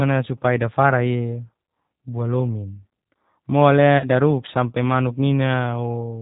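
From the start, the speech sounds slightly rough and synthetic, with nothing above 4 kHz and a plainly audible coded texture. This is the G.729 codec (here the G.729A variant) at 8 kbit/s. Instead of carrying the waveform, it rebuilds each 10 ms frame from a vocal tract filter, a pitch predictor and a handful of pulses, so fine detail is replaced by an approximation.

From 3.98 to 4.06 s, just before "daruk sampe manuk", the sound briefly smears into a buzzy tone or coloured noise that fades, and stays weak for a moment after it resumes. This is VoIP packet loss concealed by the speech codec. About 30 ms of audio went missing, which points to a single lost packet. The decoder filled the gap by extending its last pitch and filter with falling gain. Because each frame depends on the one before, recovery lagged past the gap.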